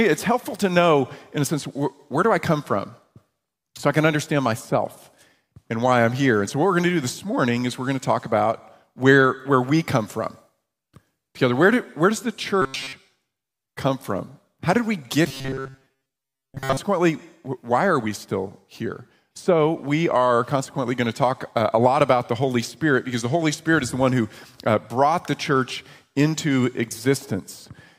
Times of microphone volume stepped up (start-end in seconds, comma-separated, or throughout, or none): none